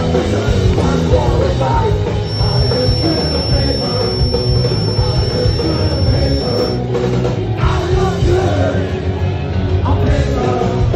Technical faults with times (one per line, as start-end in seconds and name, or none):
2.19-6.83 feedback whistle